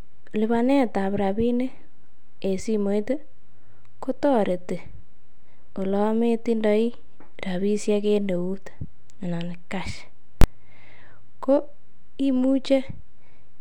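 Invalid numbers at full scale hit this speech recording at 10.41 to 10.44 s, just after "euut anan cash". A calculation produced invalid values that pinned the output at one extreme value, far beyond the speech peaks, for about 23 ms, which fits a 1024-sample block.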